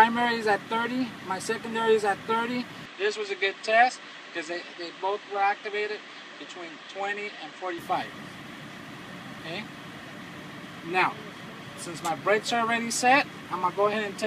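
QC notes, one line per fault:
2.85 to 7.78 s, input switched to a poorer device. The sound turns dull and boxy at 2.85 s with no gap at the change. Nothing above 8.5 kHz remains, so the top end is cut away. A new background noise enters far below the signal, well quieter than it. Loudness stays about the same. Full brightness returns at 7.78 s. The likely cause is the input moving to a narrower-band microphone or headset profile, then back.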